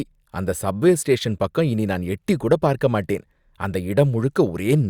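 No technical faults can be heard anywhere in the recording.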